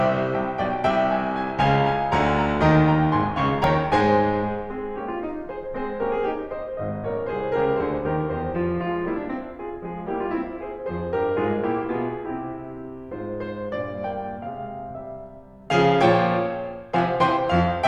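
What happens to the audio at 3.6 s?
At 3.64 s the music hits a repeated buffer. Fresh audio failed to reach the output in time, so the device replayed the last block it held. That block is only about 1.45 ms long, which fits a 64-sample buffer. It plays two extra times, with a hard join at each repeat. Because the piece is so short, the stutter collapses into a click or brief buzz. Essentially no audio goes missing.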